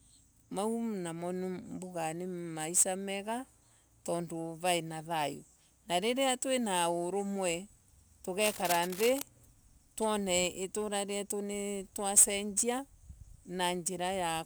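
From 8.40 to 9.23 s, cable scratch noise rasps over the speech, roughly 10 dB below it, likely from a worn cable or connector being moved. Unlike isolated clicks or crackle, it is a dense, uneven rustle of rapidly fluctuating contact noise.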